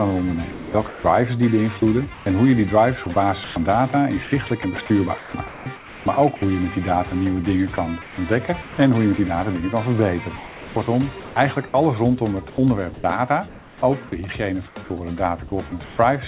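A voice detector on the sending side likely kept toggling transmission on and off, so quiet stretches were swapped for comfort noise: from 0.52 to 6.42 s (about 1.56 s replaced), 7.76 to 8.78 s (0.34 s), 10.36 to 13.82 s (1.08 s) and 14.68 to 15.98 s (0.28 s). These are sounds chopped by the voice detector, with softer edges clipped away, all within a band ending at 4 kHz that fits G.711 A-law at 64 kbps.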